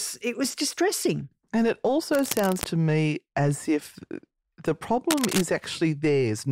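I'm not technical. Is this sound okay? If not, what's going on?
No. There are two short bursts of cable scratch noise over the speech. The first runs from about 2.12 to 2.66 seconds. The second, from 5.10 to 5.41 seconds, is shorter but louder. Both sound like rough scratching or rustling laid on top of the voice. The likely cause is a worn cable, plug or knob being moved during recording. Its contact flickers, and that adds uneven bursts of noise.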